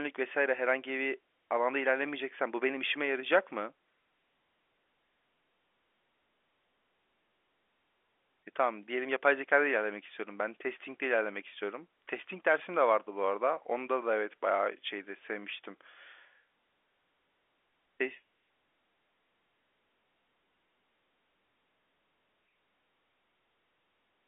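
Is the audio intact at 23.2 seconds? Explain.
Yes, the audio is intact at 23.2 seconds, with the speech coming through cleanly within the usual narrow telephone band of G.711 telephone coding.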